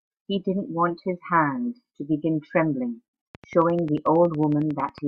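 It's a speech clip, and from 3.35 s to 4.99 s a train of clicks ticks over it at a regular 11 per second, around twenty in all, about as loud as the speech itself. That steady pulsing likely comes from nearby equipment interference or a faulty connection or power supply.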